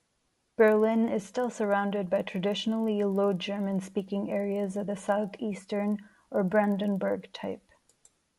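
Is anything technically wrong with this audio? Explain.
Yes, one fault runs throughout. Resampler restarted on every block: each 40 ms block was converted from 24 kHz to 48 kHz separately, so edge errors make a 25 Hz buzz during speech, showing as evenly spaced vertical lines on a spectrogram.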